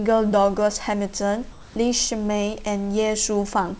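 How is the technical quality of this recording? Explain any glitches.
One glitch stands out. The recording came through a call path with nothing above 8 kHz, which fits a wideband codec such as G.722, over a room background about 34 dB below the speech. From 1.52 to 1.76 s, the sender likely stopped transmitting during a pause, and the receiver filled those 240 ms with generated comfort noise in place of the background. The real room texture gives way to a flat, featureless hiss, shifted in level by about 3 dB, before the speech comes back.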